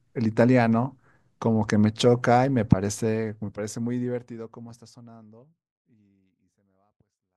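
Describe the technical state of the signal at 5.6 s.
At 5.6 s the speech signal is intact, with the level simply easing down smoothly as part of a clean fade-out, with no click or hard edge.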